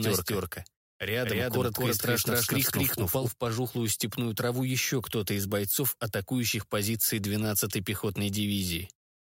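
From the very start until 3.28 s, every sound arrives twice: a second, equally loud copy trails the first by roughly a fifth of a second, giving a stuttering, slapback effect with no reverb tail. At 3.28 s the copy cuts out abruptly. This is a doubled audio track, likely the same signal captured again through a slower path, or two misaligned copies held in an edit, summed with the original at a fixed offset.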